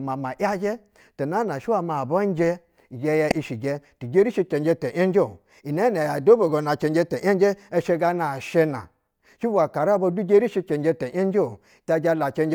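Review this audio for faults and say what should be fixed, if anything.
There's a corrupt frame decoded at 3.30 to 3.32 s: a loud, brief glitch where flipped bits in a couple of compressed frames got played anyway, scattering energy into the wrong frequencies. To prevent it, add error checking on the transmission path so damaged frames get concealed or dropped instead of decoded.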